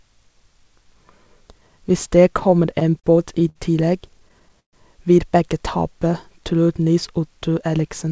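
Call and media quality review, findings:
Repeated stalls (stutter), 2.40–3.57 s: jitter buffer underruns, nine gaps up to 64 ms filled by continuing the last sound. About 15% of the span concealed, none lost, so the speech drags.

Repeated stalls (stutter), 4.09–4.75 s, ending just before "vil begge": six underruns, longest 132 ms, faded concealment. About 27% of the span filled, nothing missing, audible halting.

Jitter buffer speed-up, 7.63–8.12 s: buffer over target after bunched packets. Pitch-period cuts, around 40 ms total, run the speech at 107% speed, same pitch, sounding hurried. The G.722 band limit at 8 kHz applies throughout.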